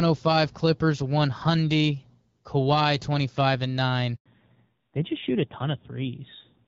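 At 4.16 s the speech drops to silence for 100 ms, resuming at 4.26 s. This is a handover gap: the call switched networks and no speech frames arrived meanwhile. From 4.26 s to the end, the speech sounds duller and rougher, with nothing above 4 kHz. This is a fallback to narrowband, from HD Voice (AMR-WB, fitting about 12.65 kbit/s) to a narrowband codec, consistent with AMR-NB near 7.4 kbit/s.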